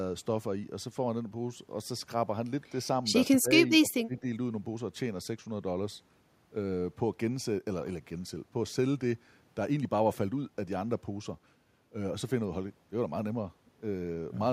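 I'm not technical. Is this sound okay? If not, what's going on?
No. Around 3.27 to 3.5 s and 3.79 to 4.25 s the speech briefly dips and partly drops out. That's speech suppressed in double talk, likely an echo canceller turning the voice down while both sides talked.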